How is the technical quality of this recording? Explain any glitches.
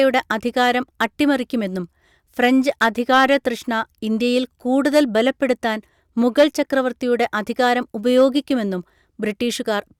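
The speech recording is marred by repeated hard clipping, at 0.61–1.04 s, 2.44–3.48 s, 4.86–5.51 s, 6.38–6.44 s and 8.17–8.25 s, overdriven by about 2 to 5 dB. Peaks exceed the stage's ceiling and are sliced flat, adding high harmonics heard as harsh crackle. Unlike gentle saturation, the edge is abrupt and brittle.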